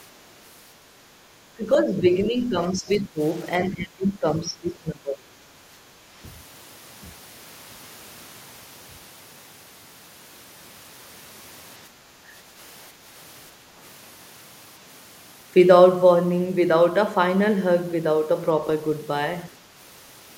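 From 1.56 to 3.19 s the speech sinks by roughly 10 dB, and from 3.65 to 5.51 s it drops more deeply, by roughly 20 dB. This is speech suppressed in double talk, most likely an echo canceller that heard both ends at once, could not tell the near talker from the loudspeaker echo, and turned everything down. The level of the voice itself dips in chunks, and that is what sets it apart from background gating.

From 11.9 to 11.97 s there is a short dip in the room sound of about 6 dB, lasting about 70 ms. This is background gated by the echo canceller. While the far end was playing, the canceller pulled the microphone down hard. Here it is the ambience in the gaps that ducks, not the speech, and it comes straight back once the canceller lets go.

From 12.25 to 12.29 s a further 40 ms bite of about 10 dB catches the speech again. This is another brief case of speech suppressed in double talk.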